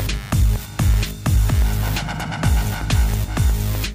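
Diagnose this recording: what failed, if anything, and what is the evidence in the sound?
Computer activity noise runs through the whole clip: a buzzing chatter pulsing at roughly 100 Hz, sitting around 25 dB below the signal, rising and falling independently of the sound. This is an analogue wiring fault, where the computer's shifting load disturbs the shared ground.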